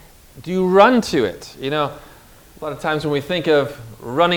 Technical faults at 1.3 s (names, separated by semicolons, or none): none